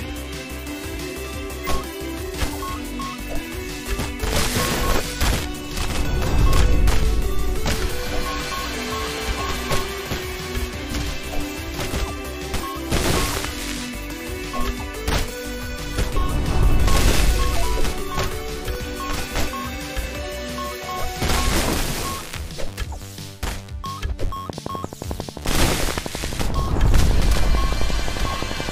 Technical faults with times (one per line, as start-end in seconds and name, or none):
0.97 dropped buffer (overrun)
7.03 dropped buffer (overrun)
9.18 dropped buffer (overrun)
18.75 dropped buffer (overrun)
24.50-28.70 train of clicks